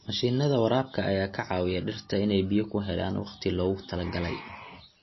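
MP3 compression damage runs through the whole speech clip, likely from an encoder starved of bits, which fits a bitrate near 24 kbps. Nothing remains above 5.8 kHz, dulling s sounds, and weak frequency components flicker between frames, giving a watery, swirling texture and smeared attacks.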